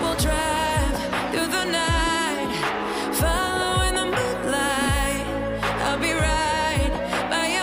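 No technical faults can be heard anywhere in this recording.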